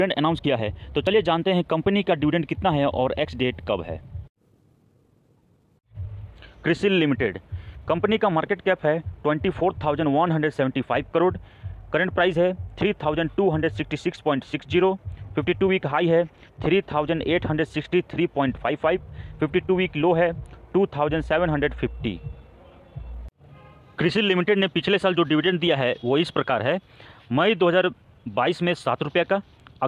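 Nothing stood out as a technical fault anywhere in the recording.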